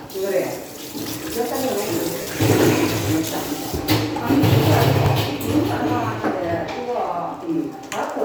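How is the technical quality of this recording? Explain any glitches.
The recording has two kinds of glitch: a small repeating stutter and one brief smeared dropout.

A click or stutter lands at 1.04, 3.05, 5.06 and 7.08 s, roughly every 2 s. These are overlapping chunks. The audio was handled in 2-second blocks, and each block begins about 12 ms before the previous one finished. That short slice plays twice at every join, so the sound briefly jumps back on itself, giving a regular tick.

From 2.21 to 2.29 s the sound turns into a hissy, blurred wash that fades rather than stopping cleanly. These are lost LE Audio frames. About 70 ms of Bluetooth LE Audio data went missing, which fits a run of roughly seven 10 ms frames. The LC3 decoder filled the gap by reusing the last good spectrum with randomised signs and fading it down. Any tonal content becomes noisy smear until real frames resume.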